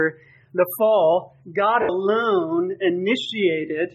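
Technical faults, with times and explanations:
1.82–1.89 s, lost LE Audio frames: for about 70 ms the Bluetooth LE Audio stream drops out and the LC3 decoder fills the gap by repeating the last good spectrum with its phases scrambled by random signs, then fading it, which fits a run of seven 10 ms frames. Any steady tonal content there dissolves into a brief noisy smear that sags in level before the clean signal returns.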